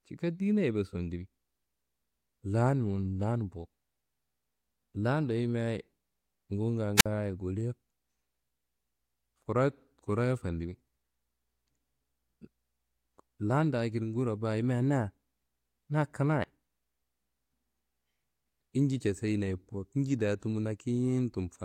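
A speech recording with a wireless microphone squelch dropout between 6.97 and 7.06 s. The radio link from the analogue FM transmitter fades, hiss swells briefly, and the receiver's squelch then mutes the output for about 52 ms before the speech comes back. On a waveform this shows as a short burst of raised noise followed by a flat, near-empty gap. A spectrogram shows a brief broadband smear of static and then a clean vertical blank band across all frequencies.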